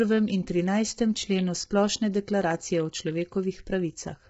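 Speech, and it's rough and grainy the whole way through, with noise filling the gaps between the harmonics and nothing above about 7.8 kHz. That's most likely heavy low-delay AAC compression: AAC-ELD's short frames blur the pitch harmonics, which fits a starved bitrate around 16 kbps.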